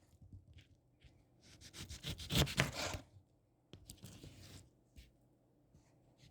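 Nothing in this recording of everyday sounds stood out as a technical fault on listening.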